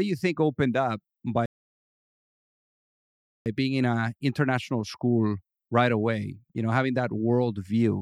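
At 1.46 s the player likely ran dry of buffered data or had its audio thread blocked, producing a playback stall: output simply ceased until the stream recovered. In this speech clip the sound breaks off right after "you think opened up" and stays silent for 2 s, the gap running to 3.46 s. It then picks up again at "being in an international", so the talker seems to freeze mid-sentence before carrying on.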